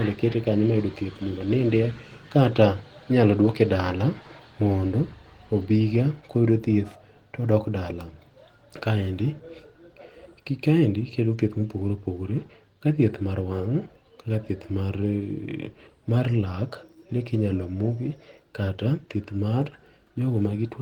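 No technical faults can be heard anywhere in the recording.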